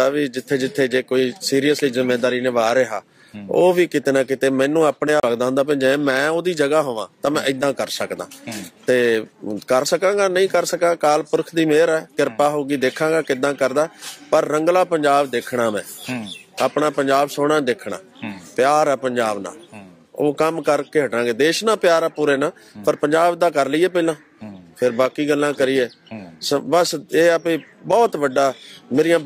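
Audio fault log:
5.20 to 5.23 s: CD skip. A brief dropout of roughly 30 ms, then the sound resumes from a different point rather than where it left off. A knock or a flaw on the disc threw the laser off its track, so it landed on another turn of the spiral. The player muted while it relocked. Playback then carried on from the new position, so the audio lurches abruptly instead of continuing smoothly.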